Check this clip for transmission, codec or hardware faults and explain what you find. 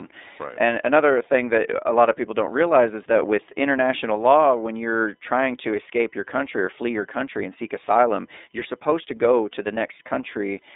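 One codec fault runs through the whole recording. iLBC codec, throughout: each 30 ms frame is coded on its own, which fits the 13.33 kbps mode, and the band is confined to 300 Hz to 3.7 kHz with nothing above 3.8 kHz, so the speech sounds muffled, rough and plainly synthetic.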